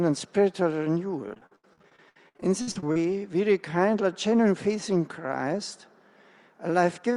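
Between 1.28 s and 2.96 s the audio breaks up with repeated packet loss, giving a choppy, robotic texture. Dropouts follow one another in quick succession, the longest about 74 ms. Each hole is bridged by stretching out the last received sound, and about a third of that stretch is this synthetic fill. Around half a second is replaced this way, and a similar amount is simply missing, so pieces of the sound are lost outright.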